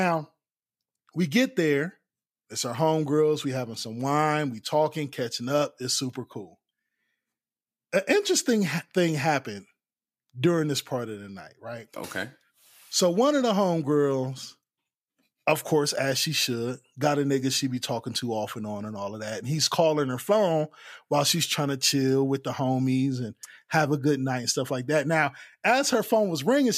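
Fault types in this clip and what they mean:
No technical faults can be heard in the recording; the speech signal stays steady and intact throughout, with no audible disruption to its level, timing or continuity.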